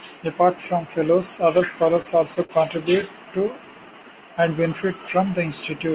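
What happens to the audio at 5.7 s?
Nothing goes wrong at 5.7 s: the speech carries on intact through that moment, still band-limited below 4 kHz as it is throughout by the G.711 mu-law call path.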